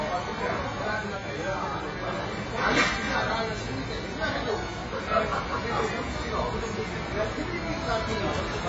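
From start to finish the audio sounds dull and smeared, with nothing above about 7.6 kHz and a warbling, fizzy texture wherever sound holds steady or turns bright and noisy. The likely cause is heavy AAC compression: the AAC-LC encoder had too few bits, so it cut off the top of the spectrum and quantised the rest so coarsely that bands dropped out or filled with substitute noise. The damage points to a very low rate, around 16 kbps.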